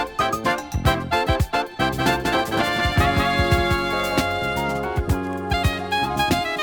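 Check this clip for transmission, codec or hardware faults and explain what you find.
One fault is present: a doubled audio track from 1.87 to 4.21 s. A second full-band copy trails the sound by roughly a fifth of a second, about 5 dB quieter, with no decay or room colour, likely from a slower capture path mixed back in. It cuts in and out abruptly.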